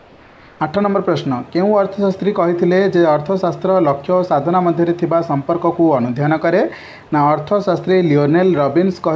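From 0.00 to 0.60 s, comfort noise stands in for the background. It is a steady, featureless hiss, about 3 dB quieter than the real background that follows. The likely cause is discontinuous transmission: the sender stopped sending, and the receiver filled the gap with synthetic noise.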